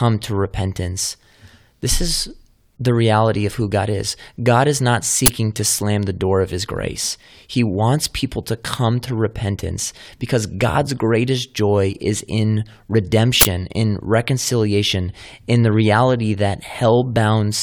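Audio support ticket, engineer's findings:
Short, loud bursts of digital noise in the speech, 5.26–5.28 s (after "is not", before "to slam the door") and 13.41–13.45 s (before "in reconciliation in the"). Uninitialised buffer: the playback path output 20 ms and 40 ms blocks before audio was written, so leftover memory played as samples.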